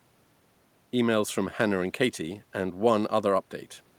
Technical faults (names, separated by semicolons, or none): none